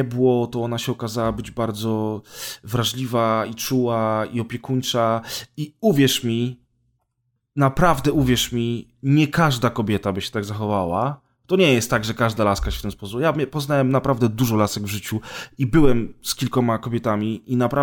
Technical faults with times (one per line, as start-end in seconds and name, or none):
none